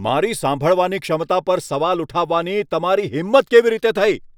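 Nothing technically wrong turns up in this short bit of speech, so there's no fault to time or trace to a cause.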